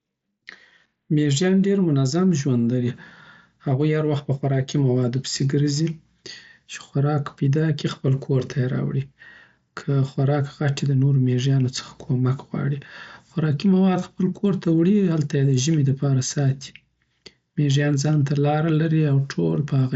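No technical faults can be heard anywhere in this speech recording. It has passed through a Bluetooth mSBC headset codec, so nothing reaches above about 7.7 kHz and loud passages carry a faint grain from the codec's fixed bit pool.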